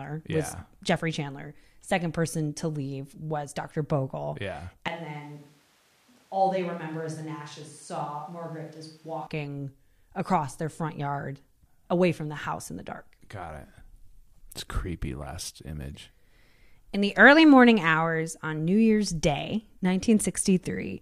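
From 4.88 to 9.27 s the speech abruptly turns roomy, hollow and about 10 dB quieter, then snaps back. This is likely a switch to a distant microphone.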